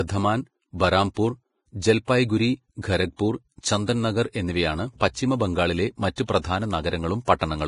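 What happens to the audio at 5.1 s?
At 5.1 s, as across the whole clip, the speech shows damage most likely from heavy Vorbis compression, consistent with a low bitrate near 28 kbps. With so few bits, the encoder discards everything above 10.5 kHz and quantises the remaining treble so coarsely that fine detail is replaced by noise of similar energy. The speech sounds dull at the top, hissy and grainy in the upper range, with softened consonant attacks.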